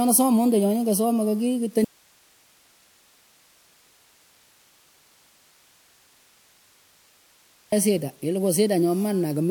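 At 1.85 s the speech cuts out abruptly: an audio dropout to a faint residue lasting 5.88 s, to 7.72 s. Only hiss fills the gap, roughly 35 dB below the signal. The likely cause is a lost feed while the path after the break stayed live.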